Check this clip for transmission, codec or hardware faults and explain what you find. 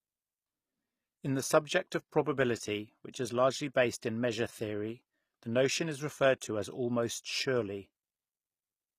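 The clip carries two codec faults: band-replication damage throughout and one pre-echo.

Throughout the speech, the treble is bright but synthetic, with s sounds gritty and lispy. This is likely HE-AAC compression, plausibly near 24 kbps. Upper bands are copied up from lower ones rather than coded, so harmonics misalign. Unlike plain low-pass band-limiting, the highs remain present but wrong.

At 4.01 s a brief hiss of about 11 ms precedes a sharp onset, softening it. This is pre-echo: quantisation noise sized for the attack spreads across the quiet start of its transform block. A click or dropout would sit on or after the onset, not before it.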